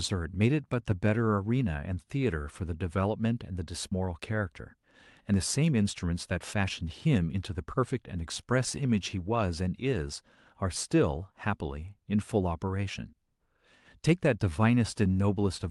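At 3.91 s the speech skips ahead: about 0.7 s of audio is discarded while later packets are already queued, and the two sides are spliced with no gap. Unlike a dropout, there is no silence or fill, just an abrupt jump to later speech.

From 5.32 to 7.95 s a jitter buffer speed-up trims an overfull buffer by repeatedly cutting pitch-period-sized pieces, about a fifth of a second in total. The speech runs at 107% and sounds hurried, but unlike resampling the pitch stays the same.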